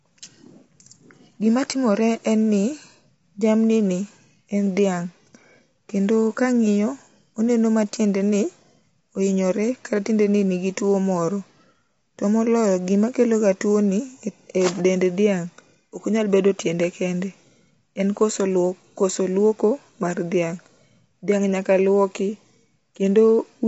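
Throughout the speech, the sound is rough and grainy, with plainly audible codec damage. Nothing is present above 7.8 kHz, so the top end is dull and closed in. Noise fills the gaps between the voice's harmonics instead of leaving them clean. This is likely low-delay AAC compression, AAC-ELD, at a rate that fits about 24 kbps. The thin bit budget leaves the grit exposed.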